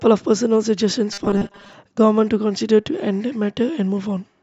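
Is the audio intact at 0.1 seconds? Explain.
Yes, the speech at 0.1 seconds is intact, with no dropout, click, distortion or other fault at that moment.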